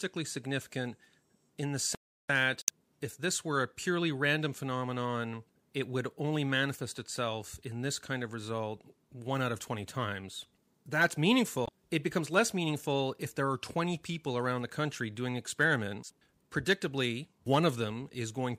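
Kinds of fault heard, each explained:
audio dropout to silence: from 1.95 to 2.29 s, right after "in the", the speech cuts to silence for about 0.35 s, likely from a lost input; waveform shows a dead-flat line, spectrogram a blank column.
damaged data in a compressed stream: corrupted frames misdecode as brief glitches at 2.60 to 2.70 s, just before "if this were a", and at 11.64 to 11.69 s, seen as abrupt waveform discontinuities.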